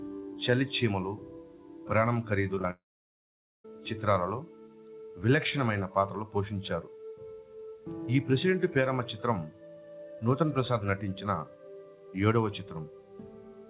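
From 2.55 to 2.70 s, repeated packet loss gives a choppy, robotic stutter: four brief holes, the longest about 19 ms, patched by repeating sound, showing as notched, smeared bands.

At 2.71 s a long network dropout is the likely cause of the audio vanishing until 3.65 s. A short fading buzz gives way to about 0.85 s of flat silence, a blank gap beneath the hard 4 kHz ceiling of the G.711 call path.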